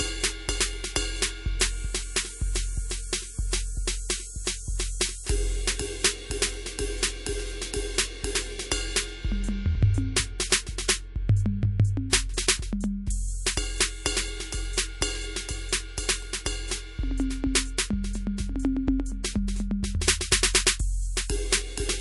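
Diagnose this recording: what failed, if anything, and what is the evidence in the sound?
The codec stage failed. The music has a watery, swirly quality with metallic edges on bright sounds throughout. This is likely MP3 compression at a starved bitrate, around 48 kbps. Weak frequency lines drop in and out between frames.

Pre-echo is audible twice, also at the codec stage. Hiss precedes attacks at 10.50 to 10.52 s, rising about 11 dB, and at 12.10 to 12.13 s, rising about 20 dB. Quantisation noise fills each block before the hit. The smearing fits long blocks with no short-block switching.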